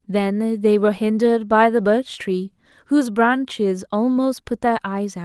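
No faults found in the speech; the only audible trace of the call path is its normal band limit near 12 kHz and the usual codec texture.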